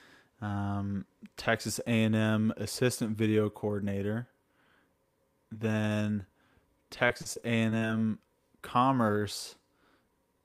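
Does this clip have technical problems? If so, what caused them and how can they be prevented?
Yes. Between 7.07 and 7.91 s the stream suffered repeated packet loss, with audio arriving late or not at all seven times in under a second. Each hole, the longest about 37 ms, was covered by stretching the last received sound, so roughly a fifth of that stretch is filler rather than real speech. The speech turns choppy and robotic, with small pieces missing. A larger jitter buffer, forward error correction, or a more stable network path would prevent it.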